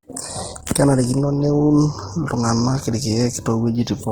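All the way through, the speech sounds grainy and rough, likely Opus compression starved of bits around 16 kbps, so bands get filled with noise.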